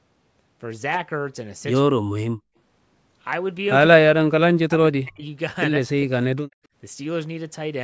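Speech clip in which the voice drops by around 40 dB at 1.84–2.26, 3.93–4.32, 4.64–5.23 and 5.79–6.40 s, likely speech suppressed in double talk by the echo canceller.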